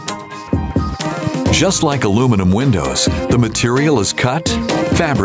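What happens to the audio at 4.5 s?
At 4.5 s, gain pumping is present, as throughout. The gain is pulled down under loud sounds, swinging roughly 10 dB, likely from a limiter fighting excessive gain.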